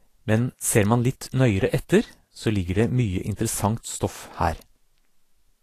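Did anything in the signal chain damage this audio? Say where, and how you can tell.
Yes. Vorbis compression, heard throughout the speech: the treble has a hissy, grainy texture, consonant attacks are blurred, and nothing remains above 14.2 kHz. This was likely done at the codec stage, with Vorbis at a low quality setting, around 36 kbps. The encoder lowered its cut-off and quantised the upper residue so coarsely that the fine high-frequency detail was replaced by noise of similar energy, which is the roughness you hear.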